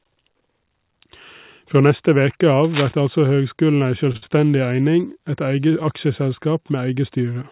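From 2.64 to 2.93 s, cable scratch noise rasps almost as loudly as the speech, likely from a worn contact shifting. It shows as ragged broadband specks on a spectrogram. Between 4.12 and 4.33 s, repeated stalls (stutter) appear: four jitter-buffer underruns, the longest 55 ms, are filled with repeated sound. The waveform shows short copied, fading segments.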